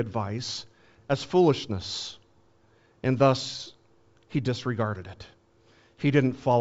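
No technical faults are audible.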